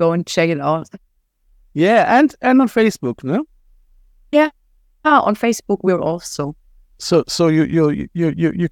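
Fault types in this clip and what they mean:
No faults detected.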